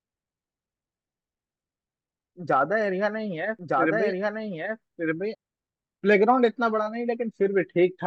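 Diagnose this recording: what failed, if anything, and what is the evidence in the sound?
A second, slower capture path or an edit likely mixed a duplicate of the speech back in, producing a doubled audio track from 3.59 to 5.35 s. The copy trails by about a second at roughly equal loudness. It is dry and full-band and cuts in and out abruptly.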